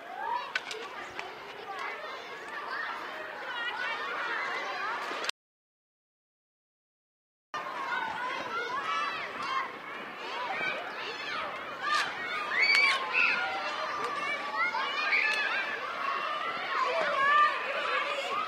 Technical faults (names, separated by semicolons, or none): audio dropout to silence